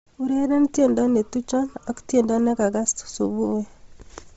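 Throughout the speech, the signal likely passed through Bluetooth LC3 compression at a low bitrate, consistent with about 24 kbps in 7.5 ms frames. The codec damage is heavy: nothing remains above 7.8 kHz, and the upper band sounds breathy and grainy, filled with noise.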